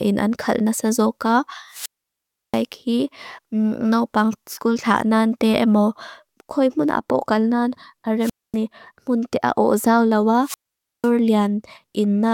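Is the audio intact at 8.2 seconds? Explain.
No. A wireless microphone squelch dropout runs from 8.20 to 8.56 s: the FM signal fades, hiss rises, and the receiver's squelch mutes the speech for about 243 ms.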